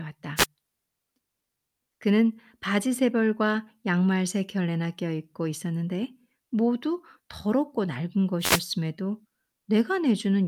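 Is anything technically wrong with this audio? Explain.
Yes. Two wireless microphone noise hits, at 0.36 to 0.46 s and 8.39 to 8.62 s: the FM radio link fades as reflections cancel, so receiver noise surges into a brief swish of static over the speech.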